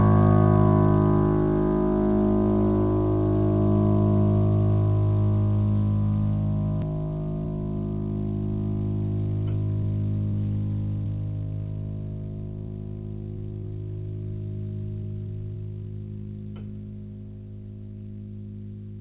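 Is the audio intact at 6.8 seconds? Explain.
No. At 6.82 s there is a skip ahead in the music. A stretch of roughly a third of a second is gone. Nothing fills the gap. Playback jumps straight forward, and the audio on either side is butted together almost directly. Later audio was already queued, and the stretch before it was dropped, in transit or by an overflowing jitter buffer. The music lurches abruptly at that instant, and the delay shortens by the same amount.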